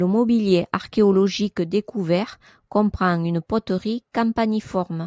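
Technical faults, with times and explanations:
Nothing wrong turns up in this bit of speech; it has simply been through ordinary call microphone processing, so there's no content above 8 kHz and the very lowest bass is trimmed, which is exactly what that processing is meant to do.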